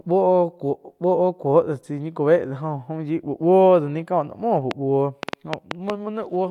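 From 4.71 to 5.91 s a train of clicks runs over the speech: roughly seven sharp ticks at about 5 per second, unevenly spaced and well above the speech level. Likely cause is interference from nearby equipment or a faulty connection or power supply injecting repeated pulses.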